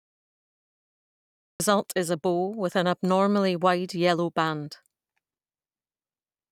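The opening 1.6 seconds are pure digital silence, and then the speech just appears mid-sound at 1.6 s with no attack or fade-in. That's a cut-off start: capture kicked in late, so whatever was already being said got chopped rather than eased into.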